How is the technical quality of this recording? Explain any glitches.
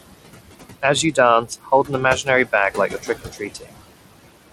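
The speech is degraded by heavy noise suppression, coarse codec grit and swallowed syllables, over room noise sitting about 11 dB below the voice.

Noise suppressor artifacts: throughout, the background drops away between phrases and returns under speech. The suppressor pulls steady noise down by about 20 dB frame by frame.

Bluetooth SBC compression: throughout, the treble is gritty and flickery, and nothing remains above 16.9 kHz. The likely cause is a low SBC bit pool starving the upper sub-bands and coarsely quantising the rest.

Speech cut by the noise suppressor: at 1.45 to 1.92 s, 2.75 to 3.09 s and 3.25 to 3.76 s, syllables sound swallowed, dipping by about 19, 10 and 19 dB respectively. The suppressor mistook a fraction of a second of speech each time for noise.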